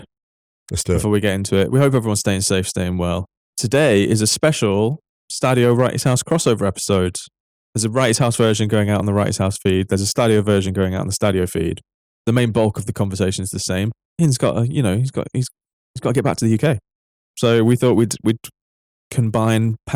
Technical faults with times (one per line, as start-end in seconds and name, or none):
0.00-19.95 hard clipping